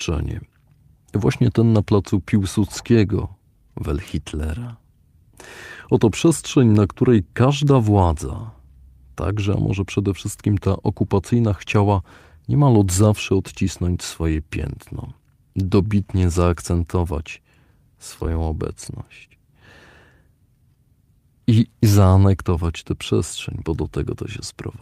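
No technical faults are audible anywhere in this speech recording.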